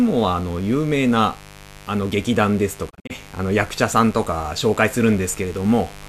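From the first moment to the end, a mains buzz sits under the speech, roughly 20 dB below it. Switching spikes, of the kind a dimmer, rectifier or unshielded lead lets in, arrive twice in every 50 Hz cycle and stack up a dense set of harmonics. That gives a raspy, edgy buzz rather than a smooth low hum, which is what tells it apart from a plain 50 Hz hum: the roughness extends well above the fundamental.

Between 2.89 and 3.12 s comes a digital broadcast dropout. The receiver stopped getting usable frames and muted until good ones returned. Instead of one clean gap, the sound breaks into several short holes spread over about 192 ms, with 120 ms missing in total and no single hole longer than 48 ms, which points to roughly five lost frames. Each cut fades over about 20 ms rather than clicking off. The missing audio is simply gone, and the speech resumes further along. That separates it from a stall or buffer underrun, where the sound pauses and then carries on from where it stopped.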